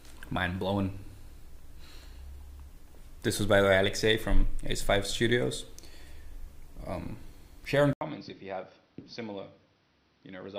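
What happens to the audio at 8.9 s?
At 8.9 s the sound is in a narrower, duller stretch running from 7.93 s to the end, most likely because the input switched to a poorer device. An 80 ms gap marks the switch. The spectrogram then shows nothing above 6 kHz and a new noise floor, and the waveform drops by roughly 10 dB.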